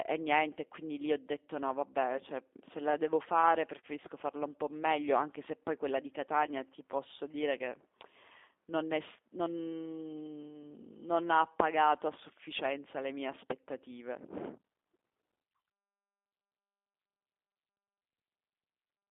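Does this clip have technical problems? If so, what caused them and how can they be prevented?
Yes. The whole speech clip carries G.729 codec damage, and it is plainly audible. The sound is squeezed into a band of about 250 Hz to 3.6 kHz, so it is thin and muffled. The codec does not send the waveform. It sends a vocal tract filter, a pitch estimate and a few pulses per frame, then rebuilds the voice. That gives a rough, buzzy, synthetic edge, which fits an 8 kbit/s G.729A link. To prevent it, use a wideband codec such as Opus or G.722.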